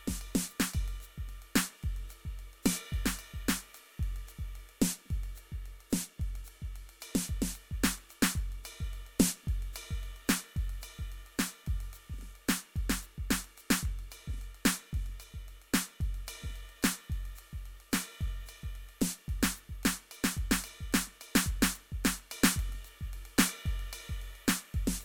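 There are no technical faults to describe in this music.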